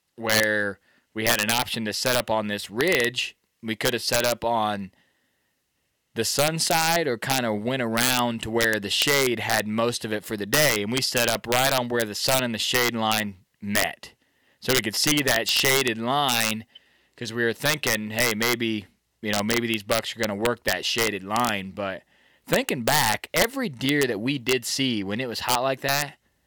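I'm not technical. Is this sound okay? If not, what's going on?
No. Throughout this speech there is integer overflow: on the loudest moments the level goes past the largest number the system can hold and wraps around to the opposite extreme. Unlike ordinary clipping, which sounds fuzzy, this gives brief, violent cracks on the loudest peaks.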